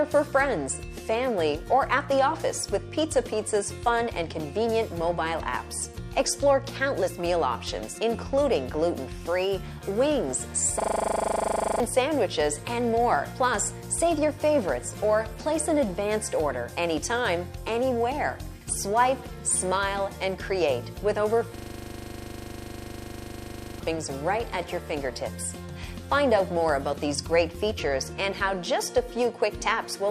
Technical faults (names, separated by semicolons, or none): system hang loop